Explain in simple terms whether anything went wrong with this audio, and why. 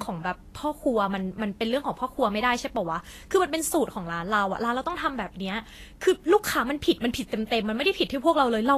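Yes, two things went wrong. Throughout, the speech sounds hissy and grainy, with roughened tones, and nothing comes through above about 14.1 kHz. That is Vorbis compression, likely from squeezing the file too hard. Unlike a steady background hiss, this graininess follows the speech itself.

At 7.49 to 7.52 s there is pre-echo: a brief hiss, about 30 ms long, creeps in just before a sharp sound and softens its start. An echo would come after the sound. This one arrives before it, because the codec spread its noise evenly over the whole block, including the quiet moment before the sound.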